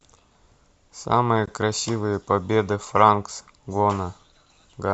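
A gap at a join of encoded pieces in this speech clip sits at 1.46 s: an 18 ms silence where separately encoded segments meet, their untrimmed encoder delay and end padding left in.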